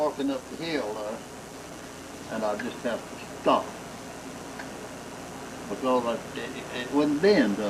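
No technical faults can be heard anywhere in the recording; the signal holds steady and intact throughout.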